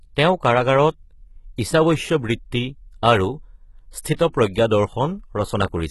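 From the start, the speech carries heavy damage consistent with HE-AAC compression, likely at a very low bitrate near 16 kbps. The codec transmits only the lower spectrum and synthesises the treble by spectral band replication, copying lower bands upward under a coarse envelope. Nothing is present above 11.8 kHz, and the rebuilt upper band has harmonics that fail to line up with those below, so sibilants sound gritty, metallic and lispy.

From 4.14 to 4.19 s, a pre-echo spreads about 50 ms ahead of a sharp onset. The transform codec distributes its quantisation noise across the whole block, so noise sized for the loud attack also fills the quiet gap before it. The result is a brief hiss leading into the onset, and the attack itself sounds softened and smeared rather than crisp.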